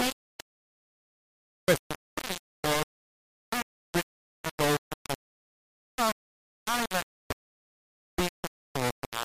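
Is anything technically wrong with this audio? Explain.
Yes. Throughout the speech there is low bit depth without dither. The sound is coarse and grainy, with distortion that rises and falls with the speech and sits nearly as loud as the speech itself. The quietest stretches sputter or drop to silence. The likely cause is heavy requantisation, consistent with about 3 bits, with rounding and no dither, so the error tracks the waveform instead of forming a steady noise floor.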